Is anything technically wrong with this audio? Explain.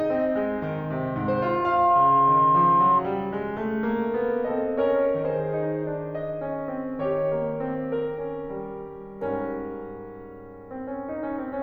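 Yes. Loudspeaker feedback squeal runs from 0.77 s to 3.04 s. A microphone is picking up the speaker it feeds, and the loop gain at 1.1 kHz exceeds unity, so that single tone swells over roughly a second and a half to about 10 dB above the music.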